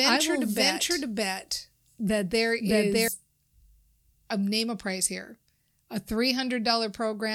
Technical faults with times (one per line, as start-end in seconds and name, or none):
0.00-3.08 doubled audio track